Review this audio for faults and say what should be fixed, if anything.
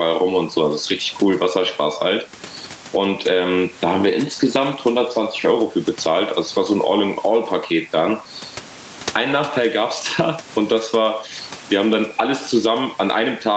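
Gain pumping runs through the whole of this speech clip: the gain swings by around 15 dB, pulled down on loud sounds and released between them. The likely cause is input gain set far too high, with a fast limiter or compressor clamping each peak and then releasing. Unlike a noise gate, which cuts the background to silence, a limiter raises and lowers the gain smoothly. Lowering the microphone gain until the limiter rarely engages would prevent it.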